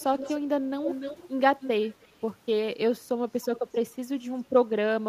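Echo leak at 0.0–0.38, 0.82–1.28, 1.6–1.7, 1.92–2.08 and 3.56–3.6 s: a fainter copy of the speech trails by 290–310 ms, about 10 dB down at first and much weaker later. It is likely a loudspeaker echo the canceller missed, and it shows on a spectrogram as faded, shifted repeats of the harmonic bands.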